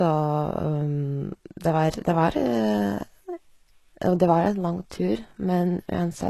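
Across the whole speech clip, the treble sounds plainly synthetic, likely from HE-AAC compression at a very low bitrate, which fits roughly 16 kbps. Only the lower spectrum is truly coded, and the upper bands are rebuilt by copying lower content upward, so s sounds come out gritty and lispy. A spectrogram shows a hard ceiling at 12.3 kHz, with smeared, blocky high bands above a visible crossover where harmonics fail to line up.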